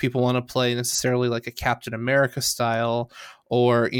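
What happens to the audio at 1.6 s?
Nothing goes wrong at 1.6 s: the speech runs through that moment intact, with no dropout, click or distortion.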